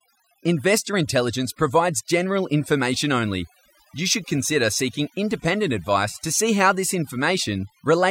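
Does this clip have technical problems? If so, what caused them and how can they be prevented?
Yes. Throughout the speech, overdone noise removal leaves the gaps nearly silent but flecked with twinkling specks. The reducer, set too strong, pulls individual frequency bands down or out wherever they sit close to its noise estimate, taking quieter parts of the voice with them. Unlike a low-bitrate codec, whose smearing clusters around sharp attacks, these artefacts track the noise floor and show up in the pauses. Using gentler reduction with a carefully sampled noise profile prevents it.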